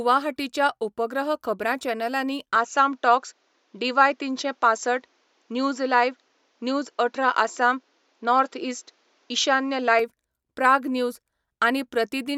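From 2.56 s, right after "उपग्रह खबरां चॅनलांनी", the speech abruptly turns duller, with nothing above 7.6 kHz. Its level shifts by about 5 dB and a faint new background noise appears, with no gap at the change. It clears at 9.99 s. The likely cause is the input switching to a poorer device.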